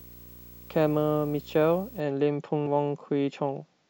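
Speech with a video or display buzz from 0 to 2.0 s: a 59.94 Hz field-rate buzz with hash and a 15.7 kHz line tone, sitting well below the speech, from screen or video cabling coupling into the audio. At 2.63 to 2.67 s, damaged data in a compressed stream produces a brief glitch as the decoder misreads corrupted frames and resyncs on the next header.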